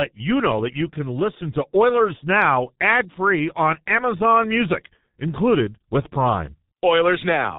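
Speech heard through a G.723.1 codec for its whole length: the band stops at 4 kHz, so the sound is muffled, and the slow 30 ms frame-based voice model leaves it hoarse with smeared consonants. The heavy damage fits the codec's 6.3 kbit/s rate.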